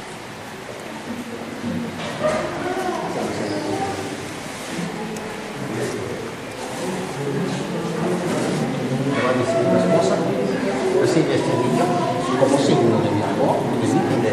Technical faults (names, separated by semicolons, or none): none